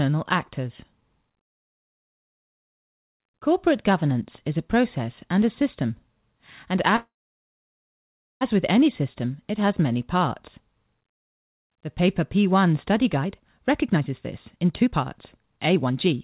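At 6.96 s the speech stops, and the gap lasts until 8.43 s. This is a call audio freeze. The last sound carries on briefly as a fading buzz or hiss, then the line goes silent for about 1.3 s. The likely cause is packets held up in transit, draining the jitter buffer. When audio resumes with "with any system it", nothing has been lost. About 1.45 s of gap has been inserted, and everything after runs that much later.

Two jitter buffer speed-ups follow. From 13.17 to 14.13 s the speech plays at about 121% speed. Then from 14.56 to 16.18 s it plays at about 131%. The buffer was holding more audio than it aims for. The receiver cut out many short pitch-period slices to catch up: about 200 ms in the first stretch and about half a second in the second. The pitch stays the same, but the speech sounds rushed. Throughout, the G.711 mu-law call path leaves nothing above 4 kHz.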